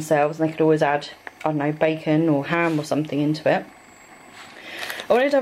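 No faults detected anywhere in the clip.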